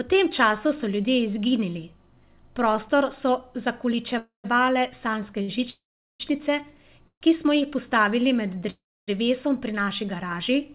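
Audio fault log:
4.18–4.46 s, 5.70–6.22 s, 7.08–7.23 s (before "ki smo jih postavili") and 8.70–9.10 s (before "pri naši"): call audio freeze. A fading buzz or hiss drops into silence lasting 0.08 to 0.39 s, likely from delayed packets, then speech resumes where it stopped.
5.42–5.50 s: short stall from a late packet. The last sound is held about 60 ms with a slight buzz or dip and no silence, unlike the freezes, then continues intact.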